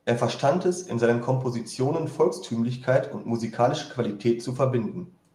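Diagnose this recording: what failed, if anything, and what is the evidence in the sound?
Nothing here points to a failure at any stage of the chain, so there's nothing to diagnose in this speech recording.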